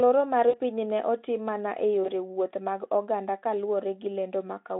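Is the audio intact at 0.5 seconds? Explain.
No. From 0.49 to 0.56 s, right after "loro mar", VoIP packet loss concealed by the speech codec fills about 40 ms of missing audio, which fits two lost 20 ms frames. The decoder stretches its last pitch and filter with falling gain, producing a fading buzzy tone or coloured noise. A spectrogram shows smeared energy that thins out, and the waveform shows a shrinking envelope, with the voice still weak or distorted for a short while into "piny ne otim mana".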